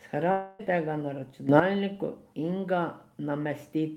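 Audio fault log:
0.31–0.61 s, long network dropout: For about 0.3 s the speech gives way to a smeared continuation of the last sound, a buzzy tone that fades without ever falling to true silence. Roughly 0.28 s of audio is lost, and speech resumes further on with that stretch missing. This is likely a packet stream that stopped arriving while the receiver stretched out its final frames. A spectrogram shows frozen, blurred horizontal bands decaying in energy. The waveform thins steadily before speech abruptly restarts.
1.49–1.60 s, sudden gain jump: For about a tenth of a second the speech and its background noise step up together by about 10 dB, then drop back. The edges are abrupt, with no fade in or out. The likely cause is a digital gain setting or bit shift applied from one sample to the next with no ramp. On the waveform this shows as a block with a hard-edged taller envelope. The spectrogram shows a brighter vertical slab covering every frequency at once, noise floor included.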